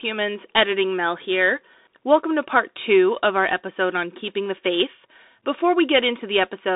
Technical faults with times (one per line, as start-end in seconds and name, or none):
0.00-6.76 Bluetooth CVSD headset codec